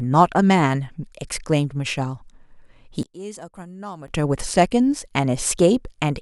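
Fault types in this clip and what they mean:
One channel inverted: the likely cause is one stereo channel flipped in polarity, so the sound common to both channels cancels in the mono sum. From 3.03 to 4.08 s the speech falls by about 21 dB, leaving only a faint residue.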